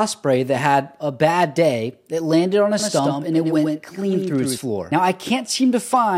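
From 2.80 to 4.58 s there is a doubled audio track. A copy trails about a tenth of a second behind, roughly 5 dB quieter, likely from a second, slower capture path.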